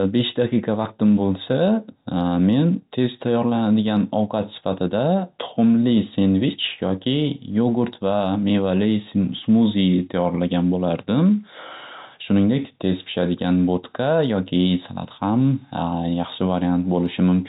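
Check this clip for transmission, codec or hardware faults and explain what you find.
No transmission, codec or hardware faults found; the speech sits within the narrow telephone band that G.711 coding imposes, with nothing above 4 kHz.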